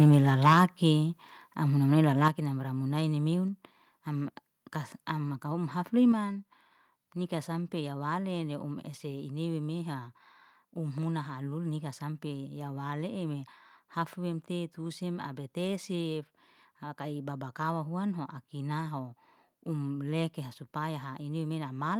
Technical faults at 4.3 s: none

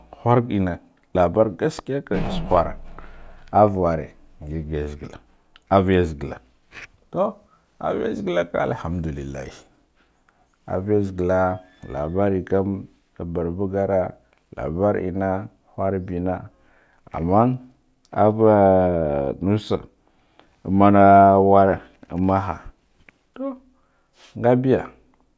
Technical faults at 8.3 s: none

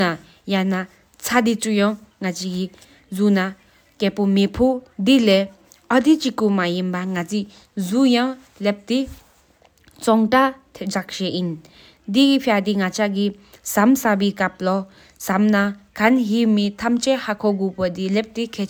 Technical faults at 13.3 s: none

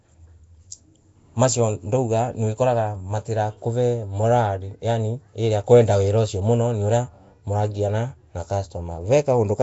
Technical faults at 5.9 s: Nellymoser compression

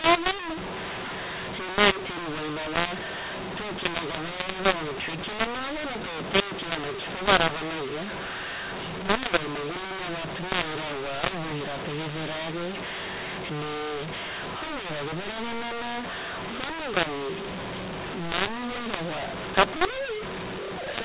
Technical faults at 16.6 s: mu-law and A-law mixed up

